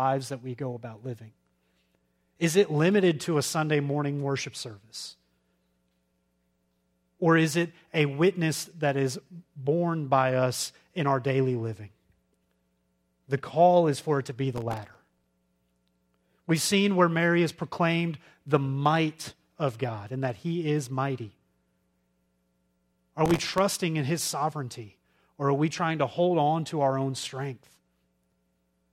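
From 14.56 to 15.27 s, just after "for it to be", processor overload crackle tears through the speech. The processor is missing dozens of buffer deadlines again and again over this stretch, and each miss replays a sliver of old audio with hard edges. The grain points to buffers well under a millisecond. A shorter burst follows from 23.26 to 23.58 s, ending just before "in his sovereignty or". Both bursts sound gritty and stop cleanly once the load drops.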